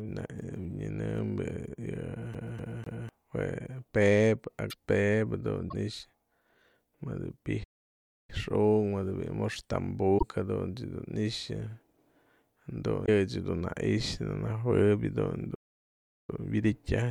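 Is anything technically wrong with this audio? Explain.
Yes. This speech recording has three distinct kinds of technical fault.

CD stuck on one turn, from 2.34 to 3.09 s. The player keeps jumping back one track at the same point on the disc, so a slice of sound about 250 ms long plays three times in a row, with a brief break at each jump back. The result is a quick, evenly spaced stutter, the familiar sound of a skipping CD, before the speech moves on.

Broken MP3 bit reservoir, at 4.69, 5.68, 10.17 and 13.05 s. Each glitch lasts roughly 40 to 60 ms, about two 26.1 ms frames. The likely cause is missing frames. A following frame then tries to pull its borrowed bits from earlier data and gets bytes belonging to a different frame. At each spot the audio skips forward, and a brief chirp, noise burst or gap replaces the clean signal.

Playback stall, from 7.63 to 8.30 s (0.65 s) and from 15.55 to 16.30 s (0.74 s). 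The speech cuts out mid-flow into silence, then resumes. The likely cause is that the player ran short of data or its processing was held up, so nothing reached the output until it recovered.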